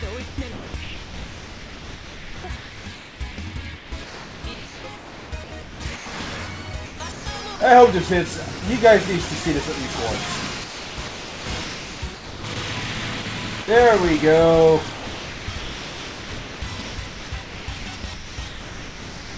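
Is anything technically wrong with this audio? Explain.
Yes. The sound keeps breaking up into patches of flat, even hiss, and in each case the likely cause is a voice detector at the sending end deciding the sound was only background and stopping transmission, so the receiver filled in synthetic noise.

Sound chopped by the voice detector occurs from 0.28 to 6.06 s, 6.86 to 7.60 s, 10.64 to 12.56 s, 13.22 to 13.68 s, and 14.94 s to the end. Within each stretch the sound drops out more than once, with the gaps filled by comfort noise. Over the first and last stretches, roughly 4.1 s and 3.5 s are replaced.

Sound dropped by the voice detector happens once, at 8.60 s. A brief 20 ms slice vanishes under steady comfort noise, then the sound returns as sending resumes. This is likely a quiet moment the detector misread as background.

The call codec also sets a band limit: nothing reaches above 8 kHz, which fits G.722.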